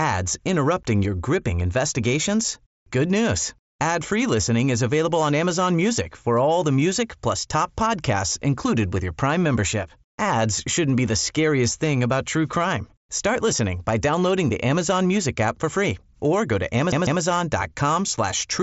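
Speech clip, heard through a Bluetooth mSBC headset path that cuts off near 7.7 kHz. Right after "free or go to", from 16.92 s to 17.22 s, the CD is stuck on one turn. A scratch keeps sending the laser back. The same 0.15 s slice repeats twice, with a brief mute at each jump. It is the quick, even stutter of a skipping disc.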